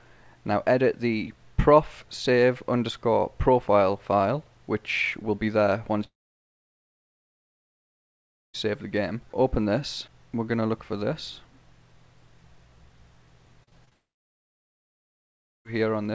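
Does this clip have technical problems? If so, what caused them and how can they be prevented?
Yes. From 6.04 to 8.56 s and again from 13.93 to 15.67 s there is a long network dropout. The sound smears into a brief fading buzz, then roughly 2.4 s and 1.65 s of silence before it resumes with the missing portion gone. This is likely a connection stall. A more stable network path or longer jitter-buffer headroom would prevent it.

Between 13.64 and 13.93 s, repeated packet loss gives a choppy, robotic texture. Four short gaps, the longest 32 ms, are each patched by extending the previous sound, covering about a third of that stretch, with the G.722 path's 8 kHz band limit throughout. Forward error correction or redundant packets would prevent it.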